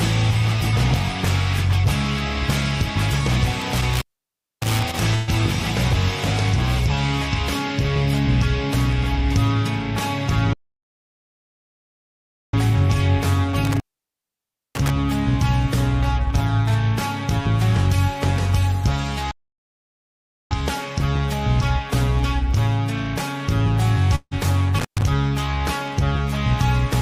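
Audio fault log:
3.62–5.00 s, 13.65–14.90 s and 24.79–25.03 s, intermittent contact: a loose cable or plug connection opens briefly, for about 0.61 s, 0.95 s and 0.12 s respectively, within each range. Each break starts and ends with a crackle as the contact scrapes open and closed. While the line is broken the sound drops out, leaving only faint hiss.
5.15–5.30 s, burst of packet loss: a run of about 120 ms of audio data never arrived in time to play. The receiver covered the gap by stretching the last sound it had and fading it, for about 119 ms. That fill comes across as a brief held buzz or fading hiss. The sound then picks up a little further on, with that slice missing.
10.53–12.54 s and 19.31–20.51 s, playback stall: the player was likely starved of data or had its thread blocked. The output goes dead mid-flow, for 2.0 s the first time and about 1.2 s the second, before resuming. 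The result is an abrupt hole in the sound rather than a fade.
24.15–24.34 s, long network dropout: about 160 ms of audio failed to arrive, likely because of a network interruption. The receiver extends the last sound for about 158 ms as a fading buzz or hiss, and then there are about 40 ms of silence. The sound then returns further along, and the stretch in between is lost for good.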